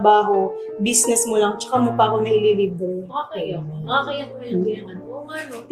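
No faults can be heard.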